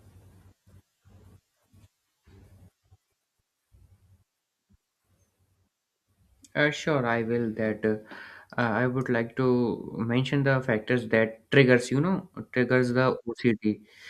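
No technical faults can be heard in this speech.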